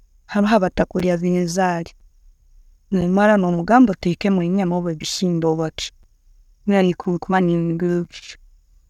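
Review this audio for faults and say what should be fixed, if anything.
Short, hard-edged dropouts of about 7 ms break the speech at 1.0, 2.0, 3.01, 4.02, 5.02, 6.03, 7.04 and 8.05 s. This is a gap between chunks: the audio arrives in roughly one-second blocks, and silence is inserted at each join without losing any sound. To prevent it, join chunks seamlessly by trimming codec padding and scheduling each block to start exactly where the previous one ends.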